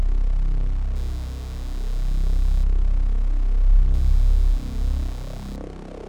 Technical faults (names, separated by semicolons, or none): computer activity noise